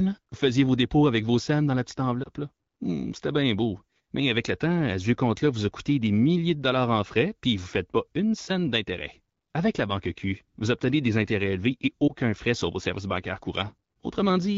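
French speech over an AMR-WB link whose light coding texture fits a rate around 12.65 kbit/s, with two lost AMR speech frames. At 2.23 to 2.29 s, after "scènes dans la petite", and at 12.08 to 12.12 s, between "des intérêts élevés et" and "frais sur vos services", the voice briefly dips or warbles. Each event matches a single 20 ms frame failing its checksum, with the decoder filling the gap from the last good pitch and vocal tract settings at reduced gain.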